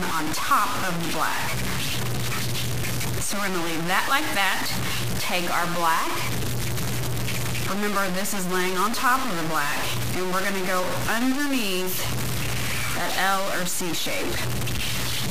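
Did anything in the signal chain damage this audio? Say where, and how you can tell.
Yes, grainy distortion that follows the sound runs throughout, likely low bit depth without dither from truncation to about 4 bits at sample-format conversion. The waveform shows coarse steps, and the spectrogram shows broadband hash about as strong as the signal.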